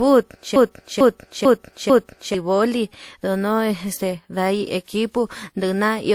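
From the start, the speech carries two sets of compression artefacts at once. This is transcoding between lossy codecs, likely a WMA stage at about 64 kbit/s followed by Opus at 48 kbit/s. Each stage adds its own smearing. Nothing remains above 20.2 kHz.

At 0.56 s a broken-record loop begins and runs to 2.34 s. A 0.45 s fragment repeats exactly, four times, back to back. The player or stream likely stalled and kept resending that fragment. The speech that belonged there is lost.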